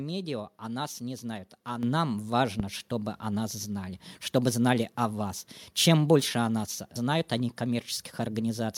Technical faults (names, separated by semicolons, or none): microphone volume stepped up; phantom power thump